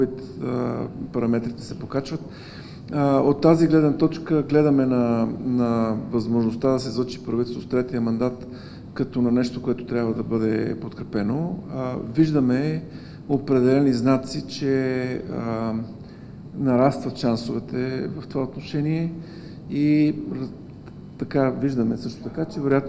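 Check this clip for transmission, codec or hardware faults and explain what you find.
No transmission, codec or hardware faults are audible anywhere in the clip.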